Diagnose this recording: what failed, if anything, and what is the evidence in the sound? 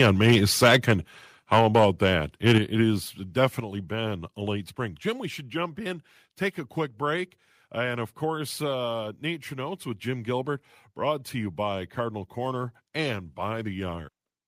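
The failure is at the converter, and the likely cause is microphone overload. Peaks are flattened from 0.0 to 0.93 s, 1.52 to 2.13 s and 2.46 to 2.58 s. They exceed full scale by about 8, 7 and 4 dB. A few percent of samples are cut, giving a harsh crackle.

The second fault is in call processing. The microphone volume is stepped down, likely by automatic gain control reacting to clipping. The level drops abruptly at 1.59 s by about 2 dB, at 2.58 s by about 6 dB, and at 3.6 s by about 5 dB. Background sound drops too.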